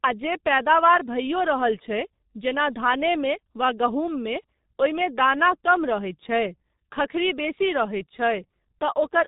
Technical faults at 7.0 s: G.723.1 codec

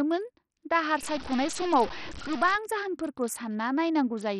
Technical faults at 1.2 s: Bluetooth SBC compression; stuck bit

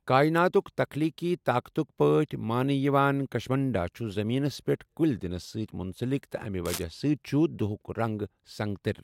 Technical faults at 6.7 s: cable scratch noise

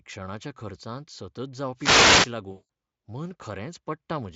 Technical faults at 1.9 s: wireless microphone noise hit

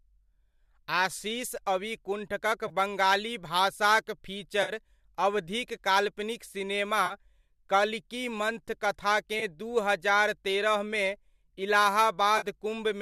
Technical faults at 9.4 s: AAC frame loss with concealment

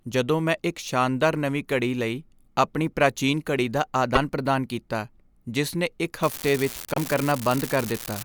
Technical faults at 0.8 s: none

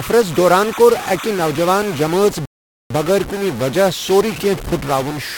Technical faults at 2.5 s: stuck bit; rebuffering stall

